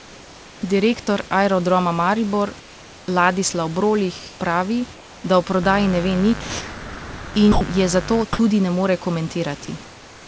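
From 0 to 0.62 s, again from 2.60 to 3.08 s, from 4.94 to 5.24 s just before "da o", and from 9.83 s to the end, the sender's discontinuous transmission likely stopped sending during pauses, and the receiver filled them with comfort noise in place of the background. The real room noise, about 24 dB below the loudest speech, gives way to a smooth, featureless hiss about 2 dB quieter, which drops back to the real background when speech resumes.

From 5.63 to 8.23 s, starting right after "pravi da o", a mains buzz comes in. Switching spikes from a dimmer, rectifier or unshielded lead enter the signal twice per 50 Hz cycle, and their harmonics stretch well up the spectrum. The result is a steady, raspy buzz roughly 15 dB below the speech that sits under everything in that stretch.

Inside that buzz, from 6.41 to 7.34 s and again from 7.52 to 7.61 s, speech is dropped by the voice detector. 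The detector likely mistook the sound for background and stopped transmitting. About 0.91 s of sound is lost in the first gap and 0.09 s in the second, and in both the speech is replaced by flat comfort noise until the detector triggers again.

At 8.37 s comes an onset clipped by the voice detector. The detector was likely slow to register that speech had restarted, so about 20 ms of the beginning was never sent and comfort noise stood in for it. The sound starts abruptly, without its soft attack. Throughout the clip, the G.722 call path leaves nothing above 8 kHz.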